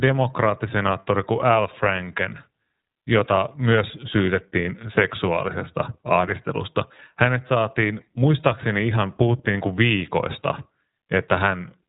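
Throughout, the speech carries plainly audible iLBC codec damage: each 30 ms frame's excitation is coded on its own, giving a rough, synthetic quality consistent with the 13.33 kbps mode. A spectrogram shows an empty band above 3.8 kHz for the entire clip.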